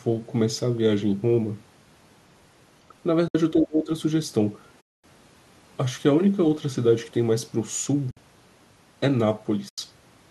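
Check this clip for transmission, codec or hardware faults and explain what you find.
Two faults turn up here, neither of them hardware.

AAC frame loss with muting hits four times: 3.28–3.35 s (70 ms), 4.81–5.04 s (230 ms), 8.11–8.17 s (60 ms) and 9.69–9.78 s (90 ms). The decoder zeroes the missing frames, and the window overlap fades the speech out and back in, so you get soft holes. The hole lengths fit frames of about 10 ms, consistent with the low-delay AAC the call runs on.

Speech suppressed in double talk shows up from 3.53 to 3.89 s. The talker drops by about 25 dB for under half a second, most likely because the echo canceller mistook the overlap of both sides talking for echo and clamped down on the near-end speech.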